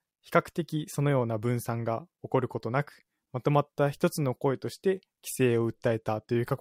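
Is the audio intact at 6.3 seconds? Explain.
No. From 5.47 s to 6.60 s a Bluetooth SBC bit pool drop starves the encoder of bits, consistent with the pool falling from 31 to 16, near 110 kbps. Upper sub-bands lose their share and the rest are coarsely quantised, so the speech turns dull and gritty.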